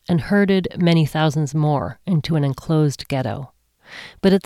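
Nothing stood out on listening to the speech recording as a technical problem at any point.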